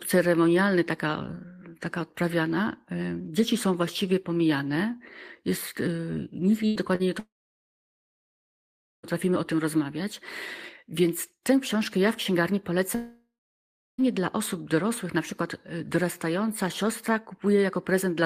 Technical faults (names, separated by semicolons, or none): burst of packet loss; short concealed packet loss; long network dropout